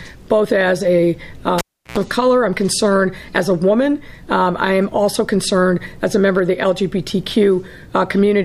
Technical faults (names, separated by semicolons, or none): cable pulled and plugged in